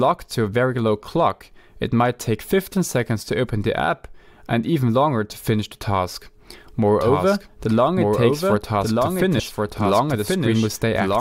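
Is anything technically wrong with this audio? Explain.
Yes. Two faults can be heard.

From 7.01 s to the end, there is a doubled audio track. A second copy of the sound enters abruptly. It trails the original by about one second and sits about 5 dB lower. The copy is full-band, with no decay or room colour. The likely cause is the audio being captured twice, once through a slower path. The result is a dry, clear repeat stacked over the live sound.

At 9.39 s, there is damaged data in the compressed stream. Some bytes in the file or stream are wrong at this point. The decoder misreads the affected frame, loses sync and hunts for the next valid frame header. This is heard as a brief chirp or blip.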